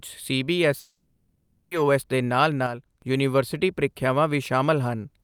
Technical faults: long network dropout; one channel drops out

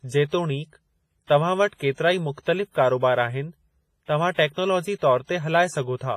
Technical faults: WMA compression; pre-echo

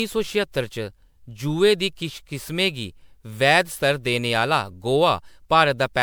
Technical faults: generation loss

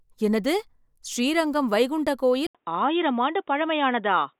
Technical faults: input switched to a poorer device

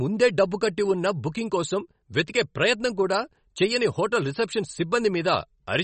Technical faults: MP3 compression

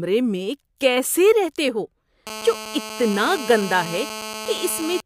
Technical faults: GSM phone buzz

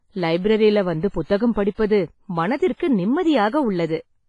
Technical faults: WMA compression

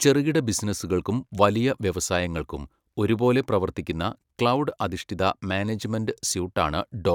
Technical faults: none

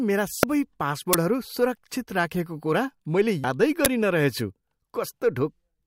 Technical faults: damaged data in a compressed stream; uninitialised buffer

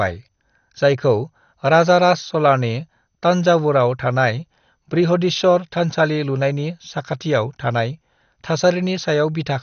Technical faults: MP2 compression

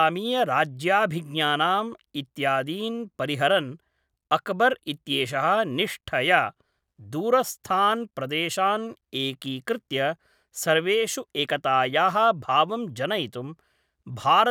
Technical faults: none

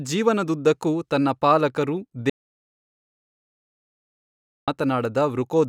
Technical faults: audio dropout to silence

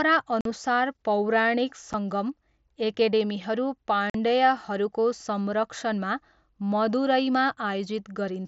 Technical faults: unconcealed Bluetooth headset packet loss

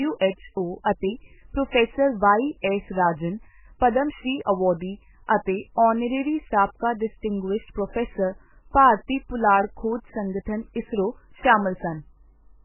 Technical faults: MP3 compression

